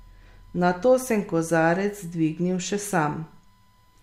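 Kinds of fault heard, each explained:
USB whine: A steady, fixed-pitch tone at 1 kHz runs under the speech for the whole clip. It is strongest at that fundamental and sits well below the voice, in the region of 45 dB down. The pitch points to the USB bus's 1 ms frame timing: the interface's current draw pulses at that rate, and the ripple gets into the audio path through shared power or ground.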